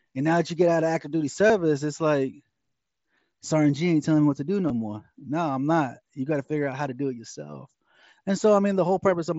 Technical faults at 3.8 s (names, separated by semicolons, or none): none